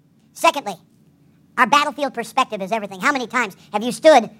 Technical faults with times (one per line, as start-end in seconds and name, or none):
0.00-4.39 wrong sample rate